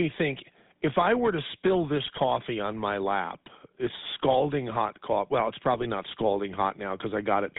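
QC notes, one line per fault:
Throughout: GSM full-rate codec. The whole clip has that buzzy, gravelly roughness you get when a vocal-tract model is driven by a sparse, regularly spaced pulse excitation instead of the real waveform. The damage is plainly audible, and it fits the old 13 kbps full-rate coder. The line band runs from about 150 Hz to 3.7 kHz, so there's no air on top and not much weight underneath.
2.04–2.20 s and 5.72–5.85 s: GSM bit errors. Two short bursts of squawk and gargle. The first sits between "I were to spill" and "on my lap it's", and the second lands just before "not scalding". Corrupted filter, pitch or gain parameters are reaching the decoder, so the spectrum gets bent and the level lurches for a handful of frames each time. That fits a weak link with a bit error rate of around 2%.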